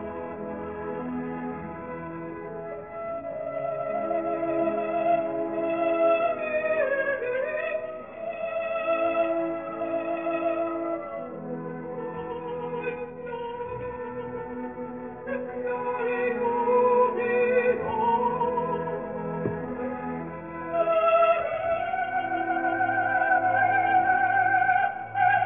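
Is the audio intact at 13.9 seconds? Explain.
No. At 13.9 seconds the audio carries aliasing, and the fault runs through the whole clip. The sound was taken to a lower rate, which fits a 6 kHz sample rate, without first removing content above the new limit. Everything above 3 kHz folds back below it at the wrong pitches. Those mirrored components sit roughly 20 dB under the signal. They add a gritty, metallic edge, and the spectrum runs hard up to 3 kHz.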